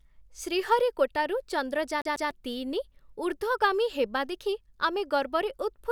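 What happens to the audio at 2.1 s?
From 2.02 to 2.31 s the speech hits a CD stuck on one turn: a scratch knocks the laser back one track each revolution, so the same 145 ms slice plays twice, giving a quick, even stutter with a brief mute at each jump. On a waveform this shows as two identical 145 ms blocks side by side with a thin gap between them. A spectrogram shows the same pattern copied twice with a narrow vertical break.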